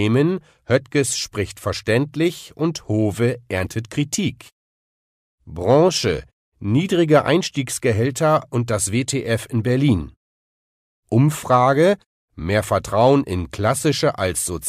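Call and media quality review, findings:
No faults found in the speech signal, and the background dropping to silence in the pauses, with each phrase returning on time, is the expected behaviour of pause muting.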